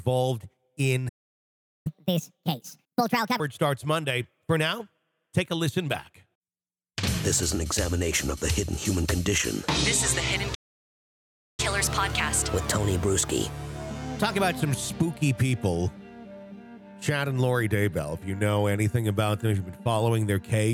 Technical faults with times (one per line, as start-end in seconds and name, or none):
1.08-1.87 playback stall
1.87-3.40 catch-up at higher speed
10.54-11.60 playback stall
11.60-14.60 catch-up at higher speed